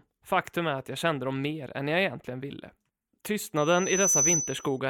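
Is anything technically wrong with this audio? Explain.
Yes, there is loudspeaker feedback squeal from 3.56 s to 4.79 s. A microphone is picking up the loudspeaker it feeds, and near 6 kHz the loop gain tops unity, so that frequency reinforces itself on every pass. Over roughly half a second it swells from faint to a piercing whistle that ends up a few decibels louder than the speech. On a spectrogram it shows as a thin horizontal line at 6 kHz growing steadily brighter. On the waveform the envelope thickens with a dense high-frequency ripple.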